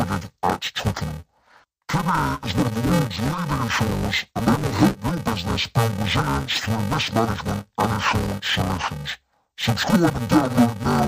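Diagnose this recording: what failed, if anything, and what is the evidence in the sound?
The failure is at the sample-format conversion stage: interleaved audio read as planar, throughout the speech. It sounds dull and robotic with a steady buzz near 345 Hz, which fits 128-sample blocks of about 2.9 ms, each split into false halves. Unlike a plain pitch shift, there is no octave drop.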